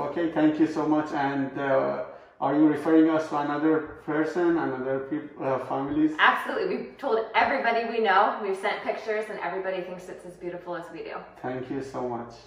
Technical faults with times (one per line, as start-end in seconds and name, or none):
none